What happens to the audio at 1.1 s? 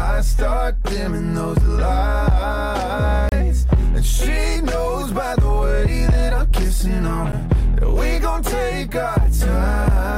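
Nothing goes wrong at 1.1 s; the audio plays through that moment intact, with no dropout, click or distortion.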